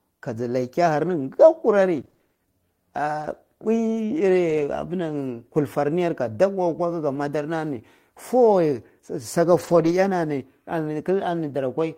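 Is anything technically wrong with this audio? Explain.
Yes. Between 1.09 and 9.93 s the speech picks up brief ticks, small smears and momentary hiccups, roughly ten of them spread out, none longer than around 20 ms. These are scattered short gaps: audio packets went missing or arrived too late, and the receiver covered each small hole by stretching out the sound just before it. Altogether 200 ms was lost and 420 ms was resynthesised, a small fraction of that stretch.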